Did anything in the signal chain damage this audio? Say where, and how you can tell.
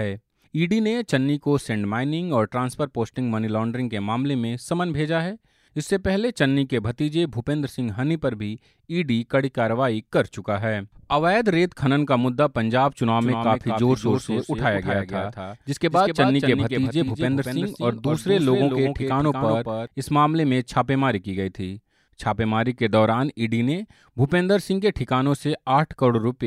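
Yes. From 13.21 s to 19.87 s the speech carries a doubled audio track: a second, full-band copy trails the original by around a fifth of a second at about 5 dB lower, then vanishes abruptly at the end of that span, just as it appeared at the start. The likely cause is the signal being captured twice, through a slower routing or capture path, or two copies overlapping in an edit. It isn't acoustic echo or reverb, because the copy repeats only once, has no decay and carries no room colour.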